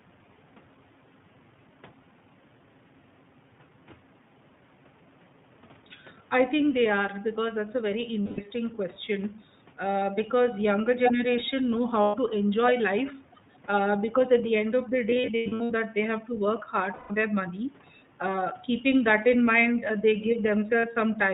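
Throughout, the iLBC codec, a narrowband coder here at 15.2 kbps with 20 ms frames, leaves the speech audibly rough and synthetic; a spectrogram shows nothing above 4 kHz.

Lost iLBC frames fill the gaps with a held, buzzy vowel that fades, seen as smeared, repeated pitch striations. They occur at 8.22–8.41 s, at 12.02–12.16 s between "because younger generation know" and "to enjoy life", scattered over 15.10–15.72 s after "the end of the", at 16.94–17.15 s after "have to work hard", and briefly at 20.80 s.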